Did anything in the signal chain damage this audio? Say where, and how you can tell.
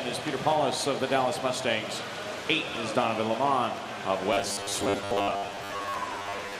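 Yes, at the buffer stage. From 4.33 s onward, a rigid 100 Hz buzz appears. This is robotic sound, likely from repeated 10 ms buffers, roughly half re-played.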